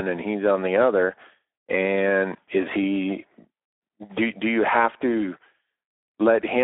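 Throughout, the speech carries plainly audible Speex codec damage. With too few bits for the excitation, the sound turns hoarse and noisy, which fits a low setting near 11 kbps. A spectrogram shows a telephone band from 300 Hz to 3.7 kHz, blank above 3.8 kHz.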